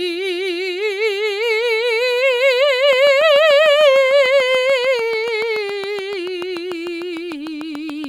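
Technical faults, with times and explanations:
2.93 to 8.05 s, train of clicks: an intermittent fault, likely interference from nearby equipment or a faulty connection or power supply, injects a pulse about 6.8 times per second at a steady pace, roughly forty in all, each peaking about 5 dB above the music, heard as regular ticking over it.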